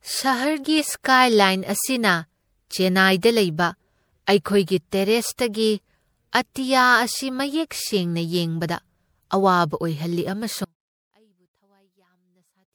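Throughout, the speech has generation loss: a swirly, hollow smear with blurred attacks, worse than a single MP3 pass at a rate like 96 kbit/s would give, with nothing above 20.6 kHz. That points to likely repeated re-encoding, a few passes, each adding fresh quantisation noise on a shifted frame grid.

At 10.64 s the speech drops out abruptly to a faint residue about 35 dB down and stays there to the end. Unlike a pause or fade, the cut is instant, and the trace of sound shows the downstream path stayed live, likely after a break upstream.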